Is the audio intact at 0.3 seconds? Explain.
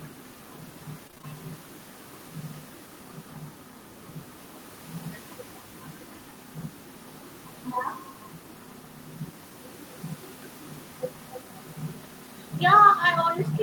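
Yes, the audio is intact at 0.3 seconds, with only the room's own background noise, about 30 dB below the speech, audible there as part of the recording.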